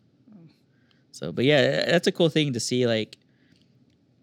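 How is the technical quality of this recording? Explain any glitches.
There are no glitches to explain in this recording.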